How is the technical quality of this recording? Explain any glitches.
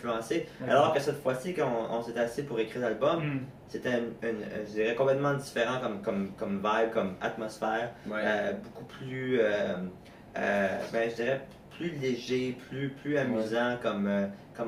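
The technical quality of this recording is sound, and there are no glitches to explain.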